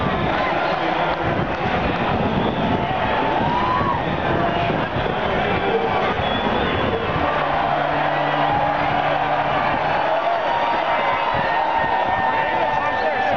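At 6.14 to 6.17 s, lost LE Audio frames cut a 30 ms hole in the Bluetooth LE Audio stream, which fits three 10 ms frames. The LC3 decoder covered the gap by repeating the last good spectrum with its signs randomised, so the phase no longer lines up with the sound around it. For that instant the audio turns into a brief noisy smear, a short hiss-like blur, before normal decoding resumes, with the light coding of the lossy compression carrying on underneath.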